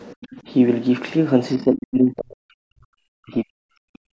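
From 0.14 to 0.33 s, and again from 1.57 to 3.94 s, the speech sinks by around 40 dB at its deepest, likely speech suppressed in double talk by an echo canceller. The waveform envelope collapses there, and the spectrogram shows near-empty gaps.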